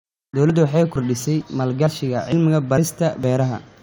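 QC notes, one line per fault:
0.50, 0.96, 1.41, 1.87, 2.32, 2.78 and 3.24 s: audio missing between chunks. The speech jumps forward at each of these points, losing something like 40 ms with no silence left behind. The spacing is steady at just under half a second, which fits audio handled in 0.5 s chunks, minus the bit dropped each time. So it's likely a recorder or processor losing a sliver while it closes one chunk and opens the next.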